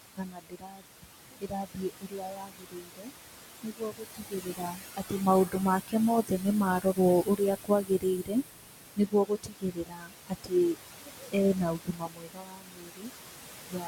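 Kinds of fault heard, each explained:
Noise suppressor artifacts: throughout, steady background is pulled down by about 21 dB frame by frame, so the room noise sinks between phrases and rises under the speech.
Speech cut by the noise suppressor: 0.15–6.47 s and 6.79–13.87 s, quiet speech is mistaken for noise and lowered by up to about 22 dB, leaving it swallowed or faint across most of both stretches.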